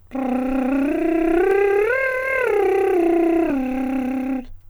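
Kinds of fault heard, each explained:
Audio missing between chunks: The music jumps forward abruptly at 1.51 s and 3.5 s. Each skip drops a tiny sliver of sound, and the two sides join with no silence. The cause is likely a recorder working in 2-second chunks and losing a little at each changeover.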